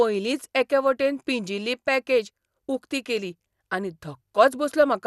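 From start to finish the speech sounds dull, with nothing above about 12.1 kHz, and carries a plainly audible gurgling, granular grit as upper bands flicker in and out. This is likely MP2 compression, with a bit budget that points to roughly 80 kbps.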